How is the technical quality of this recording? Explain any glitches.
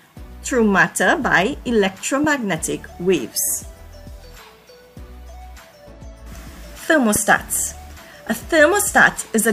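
Two loud pops mar the recording, at 2.24 to 2.26 s and again at 7.16 to 7.18 s. Each is a single sharp burst roughly 10 dB above the surrounding sound, lasting about 22 ms. The likely cause is a sudden voltage step, such as static or a switch, entering the signal path, where later circuitry shapes it into a brief pulse. Unlike a dropout, nothing goes missing; the sound carries on beneath each pop.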